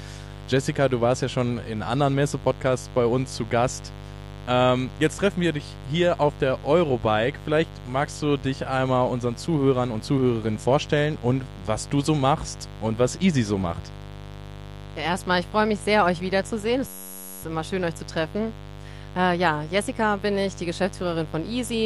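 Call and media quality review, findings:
Mains buzz, whole clip. Steady raspy buzz on a 50 Hz fundamental, roughly 15 dB below the programme, with spiky harmonics running up to several kHz. Probable component: dimmer, rectifier or unshielded cable near the capture chain injecting switching spikes twice per mains cycle. Distinct from plain hum by its bright, rasping edge rather than a smooth low tone, and by never changing across the clip.

System hang loop, 16.88 to 17.43 s. A 10.67 ms slice of audio repeats exactly 52 times, heard as a buzz at 93.8 Hz, which fits a 512-sample buffer. Probable component: host or audio driver stalled while the hardware kept replaying its ring buffer. Distinct from the mains buzz by its rate, 93.8 Hz rather than a multiple of 50, its abrupt start and stop, and its identical cycles. Little or no audio skipped afterwards.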